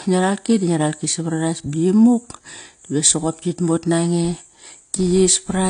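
Throughout, the speech carries smeared, low-bitrate artefacts, likely low-bitrate audio saved at a high bitrate, consistent with 32 kbit/s AAC re-encoded as 256 kbit/s MP3. From 4.25 s, just after "soqop kit mot nange", to the end, a 100 Hz buzz follows the speech level. This is a filter restarted on every block: each block starts from silence with a small transient. At 4.58 s a slight jump marks a dropped buffer, likely an overrun, where a millisecond or two of audio was overwritten and the two sides were spliced together.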